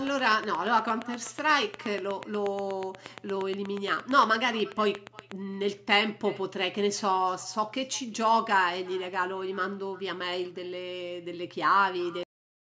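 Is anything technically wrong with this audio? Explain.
Yes, there are three problems.

First, echo with no canceller, running through the whole clip. The far end is playing the call out of a loudspeaker, its microphone picks that back up, and nothing strips it out, so the speech returns after a round trip of a bit under half a second. That echo sits about 24 dB below the direct speech, so you hear a faint, thin shadow trailing every phrase rather than a distinct repeat.

Second, a train of clicks from 0.07 s to 5.3 s. These are sharp, near-identical ticks arriving steadily at about 8.4 per second, around fifty in all, with peaks roughly 10 dB above the surrounding signal, so they stick out clearly and carry on through the gaps in the speech too. That regular pacing points to something injecting a pulse repeatedly, likely electrical interference from nearby gear or a faulty connection or power supply.

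Third, a cut-off end at 12.23 s. The final stretch of audio was never written or played out, so the speech stops mid-sound and drops straight into digital silence for the last half second or so, with no natural decay or room tail. The top end stopping at 8 kHz is just the call's normal microphone processing, not part of any of these faults.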